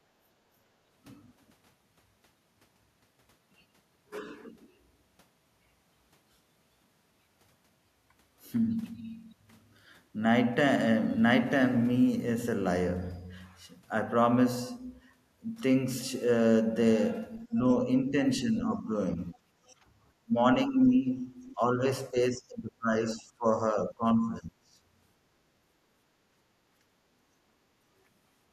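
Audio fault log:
0.71–0.82 s and 19.75–19.91 s, background gated by the echo canceller: the room tone sinks for a moment, then comes back. The first dip is shallow, about 8 dB, and under a tenth of a second. The second reaches about 9 dB and lasts roughly 150 ms, right after the leaked far-end sound ends. In both, the canceller judged that the loudspeaker was active and turned the microphone down hard, releasing it once it stopped hearing playback.
17.48–19.41 s and 20.24–24.55 s, speech suppressed in double talk: the talker's level drops in patches while the far end is also active. In the first span about half a second is affected, at up to about 15 dB down. In the second, about two seconds in total dip, at up to about 25 dB. The likely cause is the echo canceller failing to separate local speech from loudspeaker echo and attenuating both together.
19.33–19.75 s, other side's voice leaking through: a faint second voice sits under the talker, about 35 dB below the main speech, overlapping the end of the first suppression span and giving way to the gating dip that follows. 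The likely cause is the talker's loudspeaker playing the far end into the microphone, with the echo canceller leaving a residue it did not fully subtract. At this low level it registers as a brief trace.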